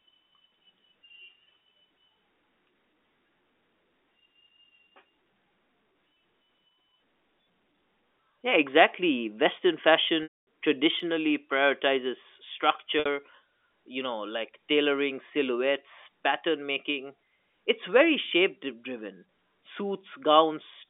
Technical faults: packet loss with pitch repetition; block of digital silence

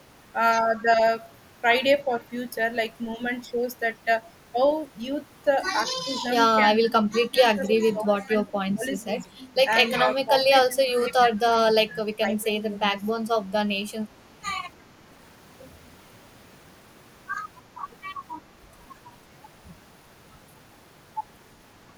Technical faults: speech suppressed in double talk

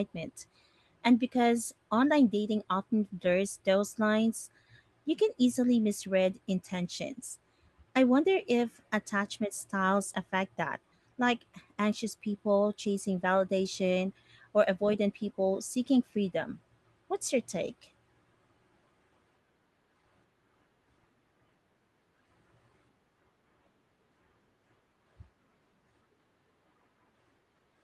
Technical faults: none

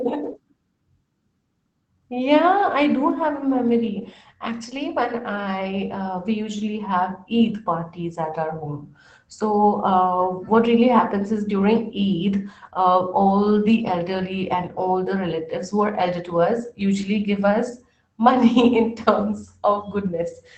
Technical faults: lost packet rebuilt from error correction

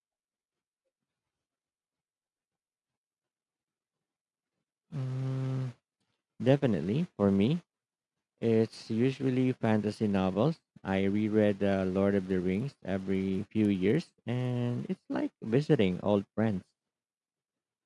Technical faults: resampler restarted on every block

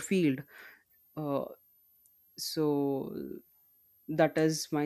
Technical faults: switching supply whistle

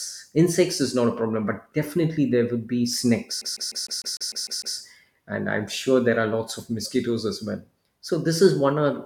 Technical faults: CD stuck on one turn

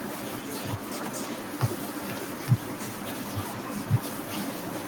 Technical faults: none

